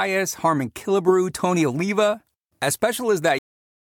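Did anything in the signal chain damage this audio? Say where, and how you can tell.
Yes. The speech stops dead at 3.39 s, in the middle of a sound, and drops straight to digital silence with no decay for the remaining 0.6 s. This is a cut-off end at the storage or recording buffer stage: the final buffers were never written.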